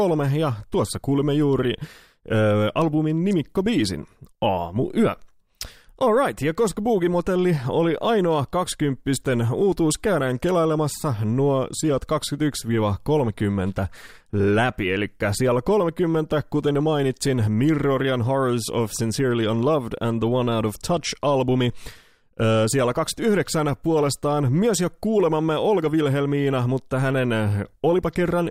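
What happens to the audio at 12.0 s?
Nothing goes wrong at 12.0 s; the speech runs through that moment intact, with no dropout, click or distortion.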